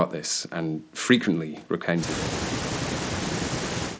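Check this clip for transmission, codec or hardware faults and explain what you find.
No transmission, codec or hardware faults turn up anywhere in the speech. The sound stops at 8 kHz, which fits a wideband Bluetooth headset link using mSBC after normal call microphone processing, and the codec leaves only a light coding texture.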